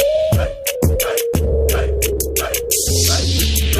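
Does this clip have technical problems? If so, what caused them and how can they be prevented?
No, no technical faults can be heard in this audio, so there is nothing to trace to a cause or to prevent.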